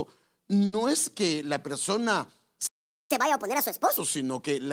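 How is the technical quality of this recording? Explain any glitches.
The recording has three timing glitches: a brief stretched sound early on, then a clear dropout followed by a sped-up, higher-pitched stretch.

At 0.65 to 0.74 s, just before "es que la persona", there is a short stall from a late packet. The jitter buffer ran dry, so the receiver held the last sound for about 70 ms until the data arrived. Nothing is lost, and you hear a drawn-out sound with a faint buzz or dip rather than silence.

From 2.67 to 3.11 s, after "es que la persona", a playback stall cuts the output to silence for about 430 ms. The player was likely starved of data or blocked. Unlike the early hiccup, nothing is held over the gap; the sound simply stops, then resumes.

From 3.11 to 3.97 s comes catch-up at higher speed. The player resamples its backlog at 1.5 times normal speed, so pitch jumps by roughly a fifth alongside the tempo. 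The pitch rise is what distinguishes this from someone simply talking faster.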